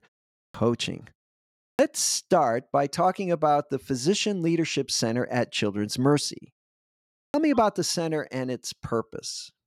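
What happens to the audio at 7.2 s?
At 7.24 s the speech comes back after a pause of about 0.79 s with a clipped start after a pause: roughly 100 ms, up to 7.34 s, is missing. The output device idles during the silence and needs time to wake again, so the first sounds of the returning speech are swallowed and it begins abruptly. Unlike a mid-phrase dropout, the loss sits right at the onset after silence, with no gap inside continuing sound.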